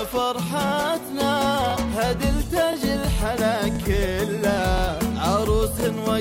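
Right at 0.68–0.71 s there's a little stutter, and it comes back at 1.71–1.73, 2.73–2.76, 3.76–3.78, 4.78–4.81 and 5.81–5.83 s. That's overlapping chunks: the audio was handled in 1-second blocks, and each new block starts about 25 ms before the previous one finished, so that sliver plays twice at every join. You hear it as a small click-stutter ticking along at a steady, roughly once-a-second rate.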